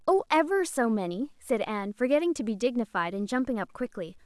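Low bit depth without dither runs throughout this speech clip, giving a grainy distortion that tracks the talker rather than sitting as steady hiss. The likely cause is the audio being cut down to roughly 10 bits by plain truncation, with no dither added first. Because the rounding error follows the waveform, it grows rough on quiet syllables and decaying word endings. That error sits roughly 50 dB below the speech.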